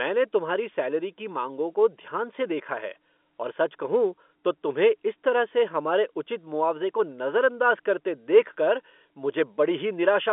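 There are no technical faults to describe in this speech, which comes over the telephone line with its usual narrow band, nothing above about 3.8 kHz.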